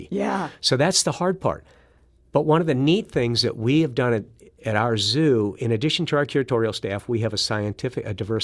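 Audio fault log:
Nothing wrong turns up anywhere in this bit of speech, so there's nothing to log here.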